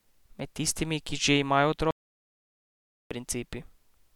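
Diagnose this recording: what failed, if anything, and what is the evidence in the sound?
The fault is an audio dropout to silence: the speech cuts off mid-flow at 1.91 s and resumes at 3.11 s, leaving about 1.2 s of silence with no room tone. The input was likely lost at the device or link stage while the recorder kept writing silence.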